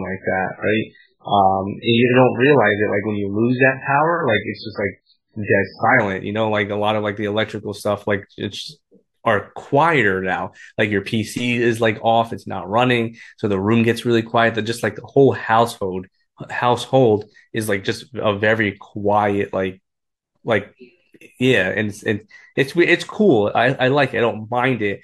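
From the start to about 6.0 s, the speech is dull and smeared, with the treble missing. That's an adaptive stream starting at a low bitrate, which fits a very low-bitrate MP3 rendition, before it jumps cleanly to a much fuller version.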